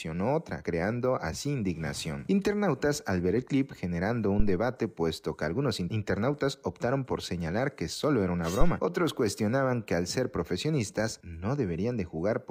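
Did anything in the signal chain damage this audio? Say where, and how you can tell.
Yes. A phantom power thump from the analogue input stage: a deep low-frequency thud from 4.40 to 4.62 s, peaking at about -12 dBFS and dying away in roughly 51 ms. Its smooth single decay from a DC supply step through coupling capacitors sets it apart from irregular handling noise.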